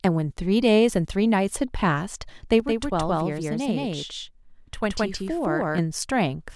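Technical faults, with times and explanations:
2.60–5.78 s, channel delay (doubling): one channel lags 171 ms, fitting a 4096-sample buffer; in mono, each sound repeats as an equal-level slap, showing as doubled envelopes on the waveform.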